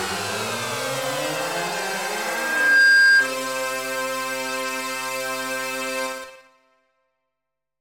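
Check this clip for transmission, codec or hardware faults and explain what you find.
One hardware fault appears: a loudspeaker feedback squeal from 2.20 s to 3.34 s. A microphone was picking up the loudspeaker it was driving, and at 1.6 kHz the gain around that loop rose above one, so the tone fed itself. It swells over roughly three-quarters of a second into a steady squeal about 15 dB above the rest of the audio before it stops.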